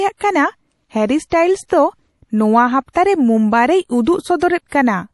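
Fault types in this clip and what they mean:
MP3 compression: likely a low-bitrate MP3 encode, with plainly audible watery, swirly artefacts throughout the speech and nothing above about 11.5 kHz.
Pre-echo: codec noise smeared ahead of sharp attacks, heard as brief hiss of 21 to 37 ms before onsets at 1.30, 1.68, 2.93, 4.04 and 4.68 s.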